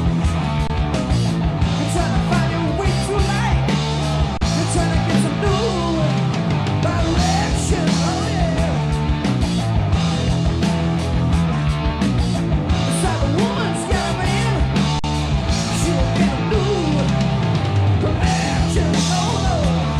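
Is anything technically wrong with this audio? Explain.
Yes, there are three underruns with held sample, at 0.67 s (23 ms, which fits a 1024-sample buffer), 4.37 s (38 ms) and 14.99 s (46 ms). The output buffer ran dry, so the converter froze on its last value. The sound briefly flattens into silence without a click, then resumes softly where it stopped, with nothing skipped.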